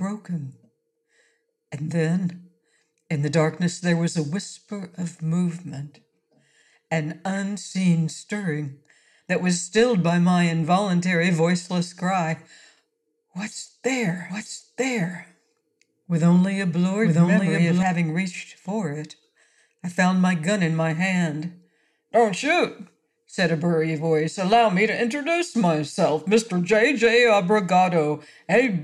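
The audio was most likely captured a second time through a slower path, producing a doubled audio track from 14.29 to 17.83 s: a full-band copy about as loud as the original trails it by roughly a second, with no decay or room colour, and starts and stops abruptly.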